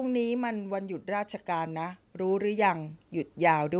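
Speech runs through a narrowband call path with nothing above 4 kHz, which fits a telephone-grade codec such as G.711. From 1.05 s to the end at about 3.8 s, the automatic gain rises: the gain control judges the input too quiet and keeps turning it up, so the voice and the background noise swell together. On the waveform the envelope widens steadily across that span, and a spectrogram shows the whole band, noise floor included, brightening in step.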